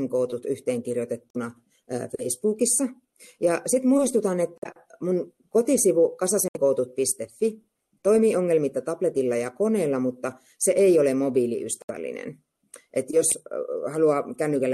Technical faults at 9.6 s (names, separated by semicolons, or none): none